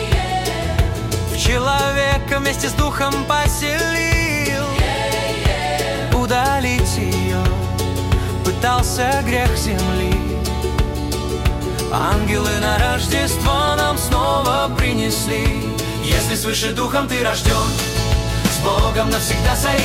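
A steady 60 Hz mains hum runs throughout, roughly 10 dB below the signal, from a ground loop or nearby transformer coupling the power line into the audio. From 12.84 to 14.24 s, CD scratch ticks appear: six short clicks, none much longer than a millisecond, where a disc blemish exceeded error correction and samples were interpolated or muted.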